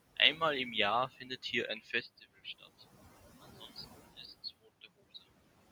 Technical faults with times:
0.00-5.72 noise suppressor artifacts
2.01-5.72 input switched to a poorer device
2.44-2.82 speech cut by the noise suppressor

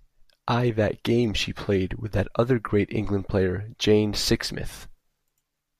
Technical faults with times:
none

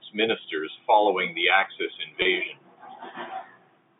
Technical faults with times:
2.22-2.25 packet loss with pitch repetition

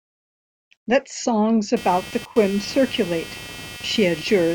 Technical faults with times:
1.76-4.55 computer activity noise

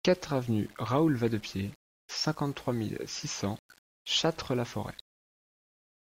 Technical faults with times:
0.00-6.05 low bit depth without dither

